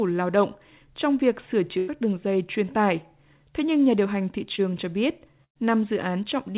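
At 1.78 to 1.90 s, between "động trong việc sửa" and "đường dây truyền tải", a burst of packet loss cuts out a run of the speech. The receiver extends the last sound for about 95 ms and lets it decay, producing a held buzz or fading hiss in place of real syllables. When the speech returns, roughly 100 ms of it has been skipped rather than delayed.

At 4.56 to 4.60 s, right after "nhà điều hành thị", a short concealed packet loss leaves a brief gap. The decoder synthesises about 25 ms of continuation from the preceding sound and crossfades back, so the moment comes across as a small smear or wobble. About 20 ms of the original speech does not survive.

A second burst of packet loss runs from 5.44 to 5.57 s. Here the concealment stretches to about 111 ms and fades out, leaving about 90 ms of outright silence. Roughly 120 ms of speech is missing when the audio picks up again.

All of this sits within a narrowband call path with nothing above 4 kHz, which fits G.711 mu-law coding.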